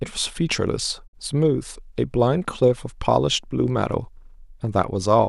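A digital broadcast dropout runs from 1.06 to 1.15 s in this speech. The receiver stopped getting valid frames and muted, so the sound fades to silence over 20 ms, then resumes later. About 48 ms of programme is missing, which fits two lost frames.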